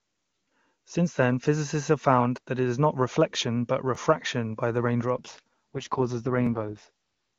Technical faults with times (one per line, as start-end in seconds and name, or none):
3.95 overlapping chunks
5.15-6.89 AMR rate drop
6.47 overlapping chunks